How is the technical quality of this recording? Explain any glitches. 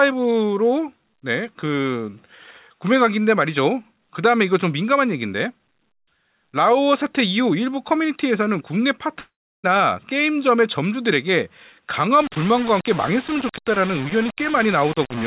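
The recording has two faults, heard over a narrowband call path with nothing above 4 kHz, consistent with G.711 A-law.

Long network dropout, 9.2 to 9.66 s: the signal likely stopped arriving for about 440 ms. The receiver stretches the last sound into a fading buzz or hiss, then roughly 330 ms of near-silence follows before audio resumes without the lost portion.

Low bit depth without dither, 12.21 s to the end: the sound is grainy and gritty, with distortion that shifts with the signal. This is likely from rounding to about 4 bits without dither, leaving error only around 15 dB below the signal.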